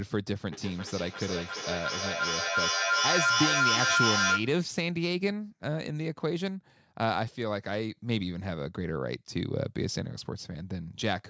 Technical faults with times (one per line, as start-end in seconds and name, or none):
0.52-4.58 feedback howl